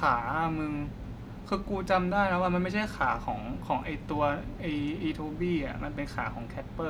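No technical faults are audible.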